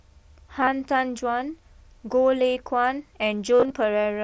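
Around 0.61 to 0.67 s there's concealed Bluetooth headset packet loss. A few packets went missing over about 60 ms, and the phone patched each gap by repeating a close match from the last bit of waveform. The longest run is only about 22 ms, so it's a brief buzzy flicker. At 3.55 to 3.73 s it's worse. About 120 ms went missing across 180 ms, including a 52 ms run, which holds a buzzy tone before warbling back into the mSBC-coded speech.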